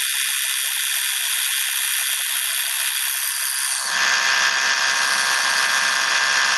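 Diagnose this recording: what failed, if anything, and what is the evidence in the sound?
Gain pumping runs through the whole recording of everyday sounds. The level drops by around 10 dB under every loud event. The likely cause is input gain set far too high, with a fast limiter in the call processing clamping each peak. On a waveform, the peaks look flattened and the noise floor rises between them. A spectrogram shows the background brightening and darkening in step with each loud sound, and everything above 12 kHz is cut off by the call codec.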